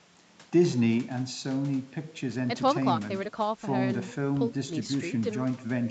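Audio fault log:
No faults heard in this speech recording.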